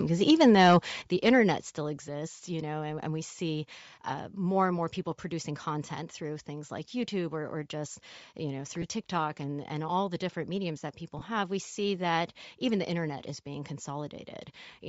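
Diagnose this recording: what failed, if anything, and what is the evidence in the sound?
Bluetooth LC3 compression runs through the whole recording, at the codec stage. The upper spectrum sounds thin and noise-filled, giving the speech a breathy, grainy edge. The damage is plainly audible and likely comes from a low LE Audio bitrate, which fits roughly 32 kbps.

Microphone overload occurs from 0.29 to 0.76 s, just before "the internet still", at the converter stage. Peaks are driven about 4 dB past full scale, and a few percent of samples have their tops flattened. This is the likely source of the harsh, crackling edge on the loudest syllables.

The microphone volume steps down twice, at the call-processing stage: at 1.02 s by about 8 dB, then at 2.04 s by about 3 dB. Speech and background drop abruptly together. The timing, right after the overloaded passage, points to gain control likely reacting to the clipping.

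Lost LE Audio frames cause two dropouts on the radio link. The first, 10 ms long, runs from 8.82 to 8.84 s after "or just you know". The second, 20 ms long, runs from 11.19 to 11.22 s between "different mediums that people" and "have we see that". The decoder conceals each gap by reusing the previous spectrum with randomised signs, so the speech turns briefly into a noisy smear.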